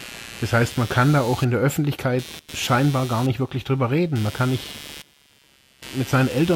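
Throughout the speech runs computer activity noise: a buzzing, chirping texture pulsing at around 150 Hz, roughly 20 dB below the voice, tracking the machine's workload rather than the talker. Processor or graphics load shifts the shared ground. A spectrogram shows a comb of harmonics, and the waveform carries a fine ripple between words.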